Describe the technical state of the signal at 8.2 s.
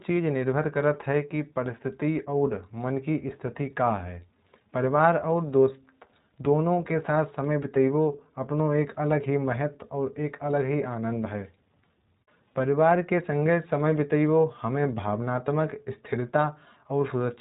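At 8.2 s the speech carries iLBC codec damage, present throughout the clip. The signal is band-limited to narrowband, so a spectrogram shows nothing above 4 kHz. Each 20 ms frame's excitation is coded independently, which fits the 15.2 kbps mode and leaves the speech plainly rough and synthetic.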